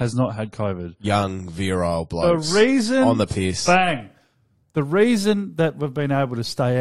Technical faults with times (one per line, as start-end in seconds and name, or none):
0.00-4.00 adaptive stream starting at a low bitrate